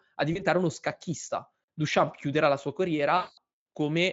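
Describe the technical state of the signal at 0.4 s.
At 0.4 s the signal is inside VoIP packet loss concealed by the speech codec (0.33–0.43 s). A 20 ms gap was extrapolated from the last pitch and filter, giving a brief buzzy or noisy, fading smear before "uno scacchista".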